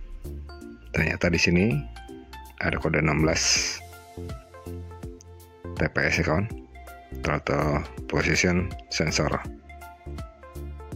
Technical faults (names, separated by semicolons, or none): none